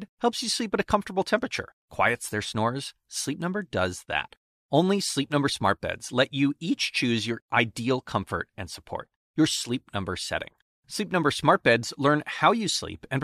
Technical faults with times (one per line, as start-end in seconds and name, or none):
none